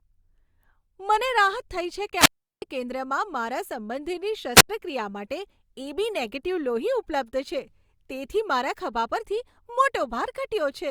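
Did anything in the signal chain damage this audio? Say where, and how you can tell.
Yes. The analogue radio link from the wireless microphone lost signal twice, so the receiver's squelch muted its output, a wireless microphone squelch dropout. From 2.16 to 2.62 s, after "થઈ છે" and before "કેન્દ્રમાં મારા સંબંધીની", the speech is cut by a hole of near silence about 365 ms long. At 4.55 to 4.69 s, just after "કેન્દ્રમાં મારા સંબંધીની", a shorter mute of about 86 ms follows. In each, hiss swells as the carrier fades, then the gate closes until reception recovers.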